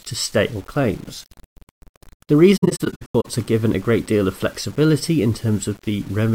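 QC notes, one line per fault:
throughout: grainy distortion that rides on the speech, with quiet passages turning gritty and the faintest tails sputtering or dropping to silence. The likely cause is low bit depth without dither, a 7-bit rounded signal, with error about 30 dB down that tracks the signal, unlike steady hiss.
2.57–3.26 s: AAC frame loss with muting. The speech breaks into several soft-edged holes, about 384 ms silenced in total and the longest gap around a tenth of a second, which fits some 18 lost frames. The decoder zeroed their spectrum, so overlapping windows fade out and back in, unlike a hard dropout.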